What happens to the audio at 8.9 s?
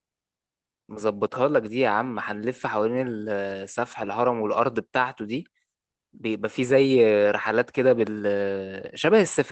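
At 8.9 s the speech is intact, with only the normal coding character of the call path and no dropout, glitch or distortion at that point.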